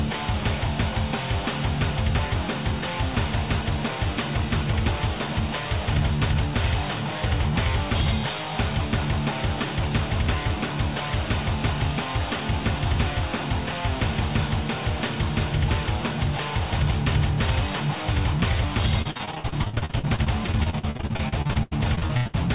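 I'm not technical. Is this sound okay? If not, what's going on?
No. Repeated packet loss (robotic sound) runs from 19.02 to 22.36 s. Bits of the audio went missing dozens of times, each gap up to 82 ms, and the system filled each one by stretching the last sound. About a third of that stretch is patch-up, which makes it choppy.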